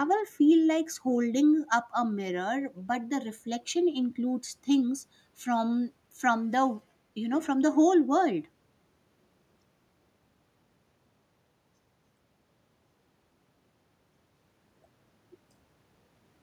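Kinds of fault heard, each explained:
Nothing stood out on listening to this recording.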